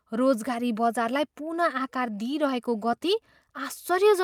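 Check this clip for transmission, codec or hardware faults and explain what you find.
No faults turned up when checking this clip.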